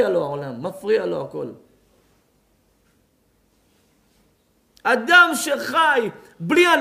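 No audible technical faults anywhere in the clip.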